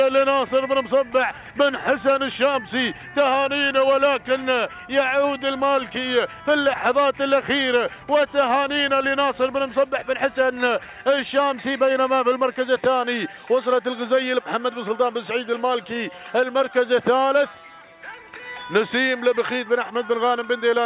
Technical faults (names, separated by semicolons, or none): none